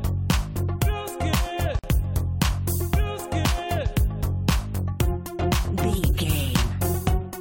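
At 1.79 s the sound drops out for about 48 ms, ending at 1.84 s: a gap at a join of encoded pieces. Separately encoded segments were butted together without trimming the encoder's start delay and final-frame padding, leaving a brief silence with smeared edges before the sound resumes.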